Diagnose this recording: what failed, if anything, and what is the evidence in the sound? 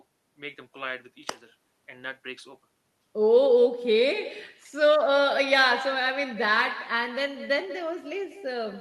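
Call processing failed: echo with no canceller. Throughout, the speech returns about a fifth of a second later, roughly 14 dB quieter. Far-end loudspeaker audio re-enters their microphone uncancelled.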